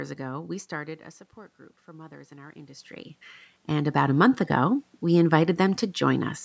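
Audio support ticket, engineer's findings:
Automatic gain rising, 1.85–2.96 s and 3.67–4.8 s: AGC ramps up about 5 dB after a 16 dB input drop; waveform envelope and noise floor swell together.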